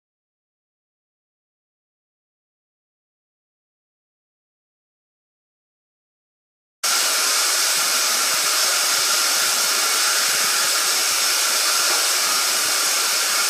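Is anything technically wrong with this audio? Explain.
Yes. The clip opens with an audio dropout to silence that is already under way when it starts and lasts until 6.83 s. For that stretch there is nothing at all, not even room tone, and the sound then begins abruptly mid-flow. The likely cause is lost input, such as a disconnected device or a stray mute, while recording carried on writing silence. On a waveform the first 6.83 s is a flat line, and a spectrogram shows a blank region ending in a hard vertical edge.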